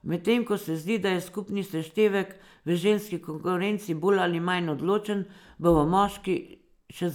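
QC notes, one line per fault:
Nothing stood out on listening to this speech recording.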